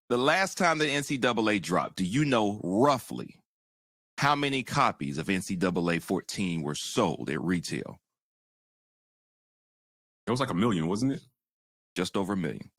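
No technical faults can be heard anywhere in this speech recording. There is nothing in it to place on a timeline.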